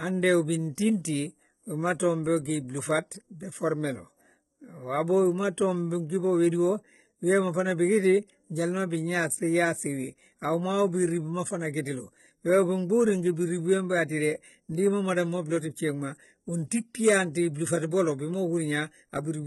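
Throughout the speech, the treble sounds synthetic and nothing is heard above about 11.8 kHz. This is likely HE-AAC compression at a very low bitrate. The upper band is rebuilt from copied lower bands. Its harmonics do not line up, so s sounds turn gritty and metallic.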